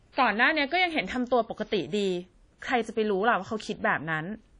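Right through the speech there's plainly audible coding damage, likely from WMA compression at a low bitrate, around 32 kbps. Long transform blocks smear quantisation noise into a ringing, washy haze with hiss that breathes along, and nothing survives above 10.1 kHz.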